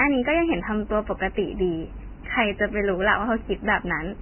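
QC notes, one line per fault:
Throughout: Vorbis compression. The speech has nothing above 3.1 kHz, and the remaining upper band is heavily damaged, turning into a hissy, grainy wash with roughened tones and smeared consonant onsets. This is likely a low-quality Vorbis encode, and damage this heavy fits a bitrate of around 10 kbps. Unlike a simple low-pass filter, the band below the cut-off is also corrupted: fine detail is swapped for noise-like texture rather than cleanly removed.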